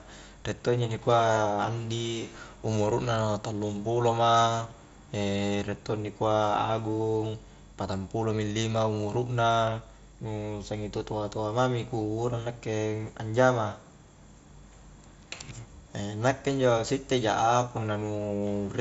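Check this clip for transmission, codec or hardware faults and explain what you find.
Nothing in this speech recording points to a fault: the signal sits within the band of a wideband Bluetooth headset link using the mSBC codec, with no content above 7.7 kHz.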